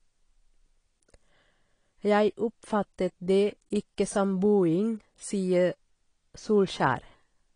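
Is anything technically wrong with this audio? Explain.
Yes. Throughout the speech there is plainly audible AAC compression damage, likely from AAC-LC at a low bitrate, which fits about 32 kbps. At that rate the encoder must quantise each frame's frequency lines coarsely against its hearing model, dropping high-frequency detail. The result is a dull, smeared sound with swirly, fizzy texture on sibilants and held vowels. A plain low-pass filter would dull the sound evenly, without that shifting, metallic warble.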